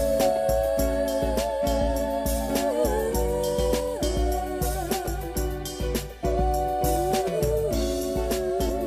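At 5.06 s and again at 8.69 s there is a brief glitch, lasting about 12 ms and 18 ms respectively. Both are damaged data in a compressed stream. Some bytes in the encoded file were lost or corrupted at these points. The decoder could not read the affected frames correctly. It lost sync and had to find the next valid frame header. The garbled output during that search is the short blip heard in the audio.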